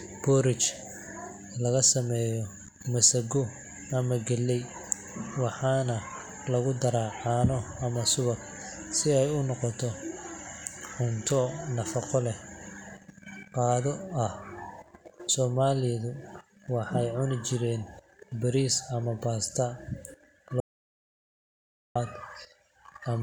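At 20.60 s the speech drops out to dead silence until 21.96 s, roughly 1.35 seconds with no room tone at all, then resumes mid-flow. That's an audio dropout to silence, likely the input briefly disconnecting or muting while the recorder kept writing silence.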